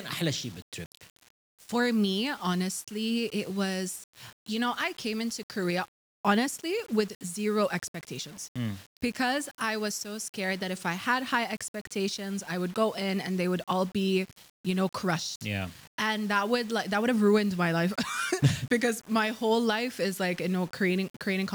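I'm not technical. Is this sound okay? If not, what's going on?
No. From start to finish the audio has a grainy, gritty roughness that rises and falls with the sound. The likely cause is low bit depth without dither: the audio was stored with very few steps of loudness, which fits about 7 bits, and each moment was rounded to the nearest step. Ordinary background hiss stays steady, but this grit clings to the sound itself, growing harsher in quiet passages and vanishing in silence.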